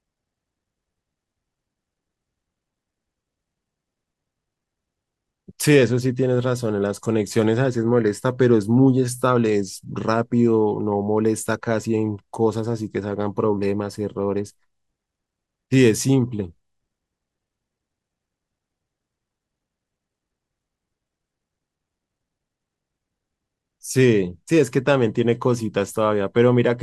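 Nothing in this recording points to a technical fault, so there's really nothing to flag here.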